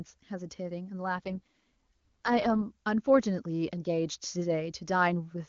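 From 1.16 to 2.63 s there's an AMR rate drop: the HD Voice codec falls to what sounds like its 6.6 kbit/s floor, so the speech turns raspy and synthetic with no gap.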